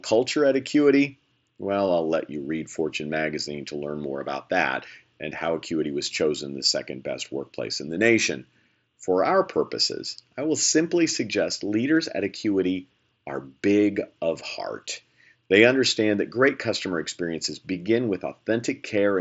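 No technical faults turn up anywhere in this speech recording. It comes through a Bluetooth mSBC headset codec that is working as intended, so the sound stops at about 7.7 kHz and carries the light grain of that codec on louder passages.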